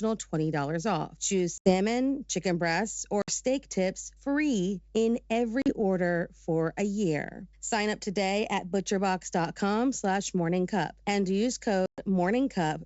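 A steady 50 Hz mains hum runs under the whole speech clip, about 30 dB below the signal. On a spectrogram it is a thin, constant line at the bottom. The likely cause is a ground loop or nearby transformer. Packet loss on an ADPCM call then cuts hard-edged gaps at 1.58 s (80 ms, just before "chicken breasts"), 3.22 s (60 ms, between "chicken breasts" and "steak tips free in"), 5.62 s (40 ms, before "order for a year") and 11.86 s (120 ms). The waveform drops abruptly to flat silence. When the sound returns, the decoder's predictor and step size are out of step with the sender's, so it comes back slightly distorted before settling. The surrounding wideband G.722 coding keeps the speech clear to about 7 kHz.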